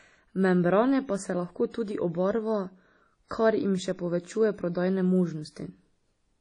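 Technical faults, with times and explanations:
Throughout, WMA compression: the speech has likely passed through a Windows Media Audio encoder at a low bitrate, and the damage fits something near 32 kbps. The transform codec spreads its quantisation noise over long blocks, so each syllable carries a washy, ringing smear and a hiss that swells and fades with the signal. Weaker spectral lines are zeroed, and nothing survives above about 10.1 kHz, leaving the top end dull and hollow.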